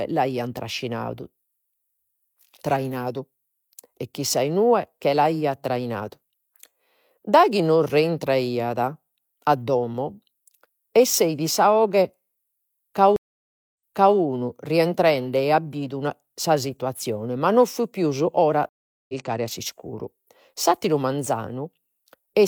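At 13.16 s the speech drops out for 578 ms. This is a stream reconnect. The connection broke, the player fell silent, then reconnected with a fresh decoder. It resumes 427 ms earlier, so a short stretch repeats. At 18.69 s it happens again. The gap lasts 399 ms. This time the speech picks up roughly 300 ms later, at "a s'iscuru". That missing audio is simply lost.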